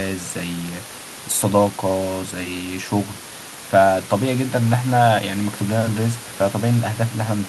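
Nothing is technically wrong with this speech clip.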